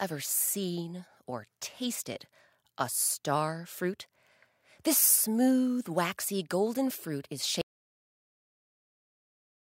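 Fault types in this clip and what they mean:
Audio dropout to silence: at 7.62 s the speech cuts off abruptly and the remaining 2.1 s to the end are silent, with no room tone or noise floor. The likely cause is a lost input, such as a disconnected device, a failed link or a stray mute, while recording carried on writing silence. On a waveform the trace collapses to a flat line, and a spectrogram shows a sharp vertical edge followed by uniform black.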